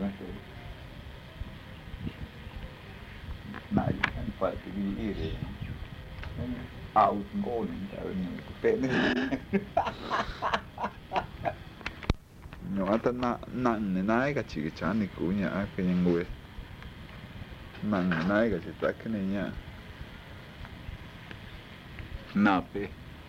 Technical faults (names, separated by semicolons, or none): none